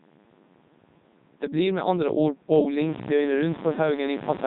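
Throughout, the speech passes through the Codec 2 vocoder at 3.2 kbit/s, which discards the waveform and resynthesises it from sine waves, so it sounds heavily robotic and buzzy.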